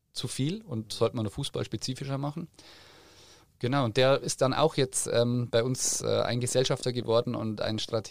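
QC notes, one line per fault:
5.16–7.92 s, train of clicks. After "ist dann auch jetzt", some thirty uneven ticks arrive, about 10.6 per second. They peak near speech level. Likely interference.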